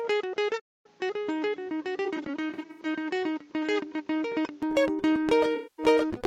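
A music clip that sounds dull and boxy from 0.00 to 4.63 s, with the level about 5 dB lower and a new noise floor roughly 35 dB under the music. At 4.63 s it clears up with no gap. The likely cause is an input switched to a poorer, narrower-band device for that stretch. From 0.59 to 0.86 s the music stops dead for about 250 ms and then carries on, a playback stall that likely comes from the player running out of data or being blocked. Between 2.05 and 2.80 s short smeared, phasey patches totalling about 235 ms are scattered across roughly 725 ms, the longest around 70 ms. A second stretch of lost audio totalling about 235 ms sits at 5.55 to 5.86 s. Both are AAC frame loss with concealment, where the decoder patches the missing audio from the last good spectrum, leaving noisy, blurred fills instead of the original music.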